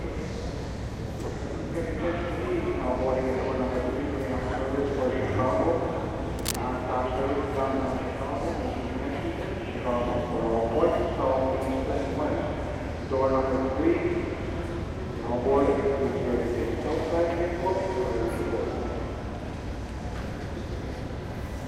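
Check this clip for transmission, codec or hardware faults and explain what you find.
One hardware fault is present: cable scratch noise from 6.39 to 6.56 s. A burst of dense, uneven rustling sits over the sound, only slightly quieter than it. This is likely a worn cable, connector or control being moved, with its contact resistance jumping rapidly. Unlike a single click or pop, the noise is a ragged cluster lasting about 0.17 s.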